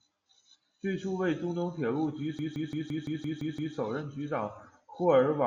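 Speech, with a system hang loop from 2.39 to 3.76 s: a 170.67 ms slice repeats exactly eight times at 5.86 Hz, a machine-gun stutter that fits an 8192-sample buffer. Unlike dropouts or concealment repeats, each pass is identical and evenly spaced.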